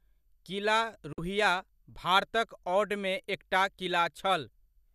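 Speech, with one digital broadcast dropout from 1.13 to 1.18 s: the receiver mutes with a 3 ms fade, losing about 48 ms of programme, consistent with two corrupted frames.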